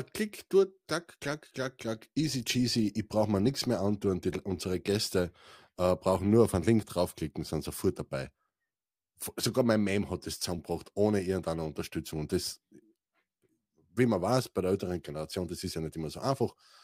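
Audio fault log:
4.57 s and 10.59 s: overlapping chunks. Each join repeats about 13 ms of speech, heard as a brief click or stutter. The second falls between "hat das" and "ohne irgendeine". The two events are 6.0 s apart, matching a 6.0 s chunk length. Each new chunk begins slightly before the previous one finished, so the overlap plays twice. The sudden jump back in the waveform causes the click.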